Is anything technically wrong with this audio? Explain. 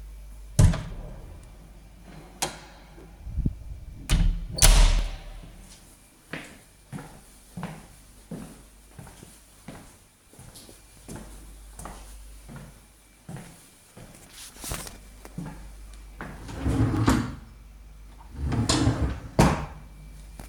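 Yes. Periodic USB or driver dropouts occur every 2.0 s from 1.01 s to 18.98 s, about ten in all. Something blocks the audio path each time, and a few milliseconds of sound are skipped. The skips are heard as regular ticks while there is signal.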